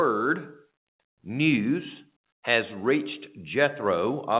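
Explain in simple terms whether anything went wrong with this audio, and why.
Nothing went wrong; no faults can be heard here.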